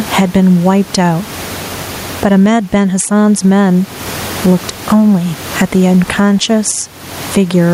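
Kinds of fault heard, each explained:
Gain pumping: The level breathes all through the speech. The room noise sits about 29 dB below the speech. The swing is around 20 dB. Loud and quiet syllables end up close in level, so the speech sounds squashed. The likely cause is input gain set far too high, with a fast limiter or compressor clamping down on every loud sound.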